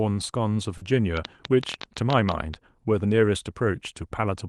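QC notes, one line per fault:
0.77–0.83 s, short concealed packet loss: 40 ms went missing and was filled by extending the preceding sound, a brief smear rather than a click or silence.
1.17–2.55 s, train of clicks: around fifteen same-shaped pulses, about 10 per second, unevenly spaced and well above the speech, likely interference; they persist through pauses.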